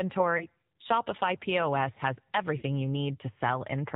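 Speech coded with the AMR narrowband mobile codec, with plainly audible codec damage throughout. The buzzy, synthetic quality fits a low AMR-NB mode around 7.4 kbps, where a pitch predictor and a few pulses per 5 ms drive a vocal tract model. On a spectrogram, all energy stops at a flat ceiling at 4 kHz, with nothing above it, because the codec runs at 8 kHz sampling. Lost AMR speech frames occur twice, at 0.38 to 0.46 s and at 2.58 to 2.63 s. The first fits a single 20 ms frame and the second two frames, about 40 ms. Each frame failed its checksum, so the decoder filled the gap by reusing the last good pitch and vocal tract settings at falling gain. The result is a brief dip or warble. A waveform shows the envelope sagging there, and a spectrogram shows smeared, repeated harmonics rather than a clean gap.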